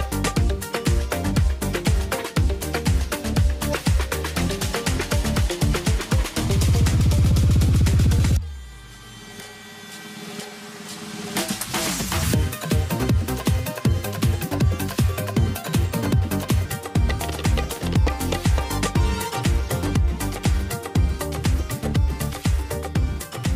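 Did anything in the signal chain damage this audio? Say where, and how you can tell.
Yes. From 12.23 s to 16.65 s there's a section at the wrong speed: everything suddenly runs about 1.32 times too fast and jumps up roughly five semitones, then drops back to normal. Because pitch and tempo shift together and switch abruptly at both edges, this isn't pitch processing. It's a likely clock mismatch at playback or in editing, where that stretch was read out at a faster rate than it was captured.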